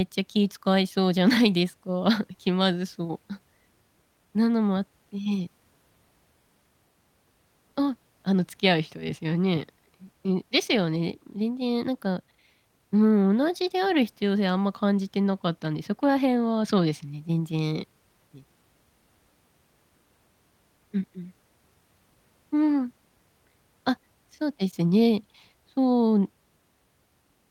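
Nothing in the recording stands out as a technical problem, and the speech carries on without a hitch the whole way.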